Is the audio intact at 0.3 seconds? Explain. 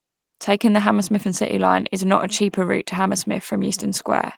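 Yes, the speech is intact at 0.3 s, carrying only the light softening of its Opus voice compression.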